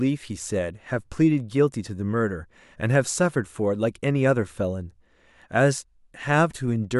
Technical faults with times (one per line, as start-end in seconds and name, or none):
none